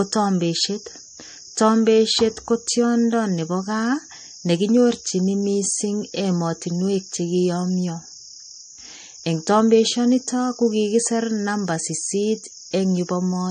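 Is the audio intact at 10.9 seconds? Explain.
No. At 10.9 seconds, as across the whole clip, nothing sounds above 9.1 kHz and the speech has a plainly audible watery, swirly quality. The likely cause is MP3 compression at a low bitrate: starved of bits, the encoder cuts the treble and drops weak frequency lines that flicker frame to frame. A spectrogram would show a flat ceiling at 9.1 kHz and speckled gaps below it.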